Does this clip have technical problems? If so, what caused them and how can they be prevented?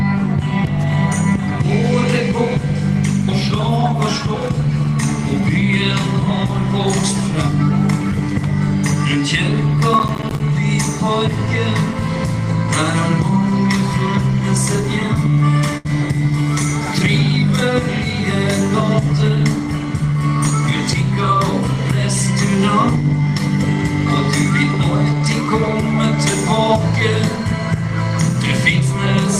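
Yes. From 9.94 to 10.40 s there is processor overload crackle: the processor repeatedly missed its buffer deadlines, and each miss left a short hard-edged silent gap. The gaps fit buffers of around 10 ms, with roughly fifteen missed over that stretch. Prevent it by reducing processing load or using larger buffers.

From 15.77 to 15.87 s a burst of packet loss occurs. The receiver continued the last sound for about 72 ms while fading it, then resumed roughly 80 ms later, dropping the audio in between. Prevent it with a more stable network, forward error correction or a deeper jitter buffer.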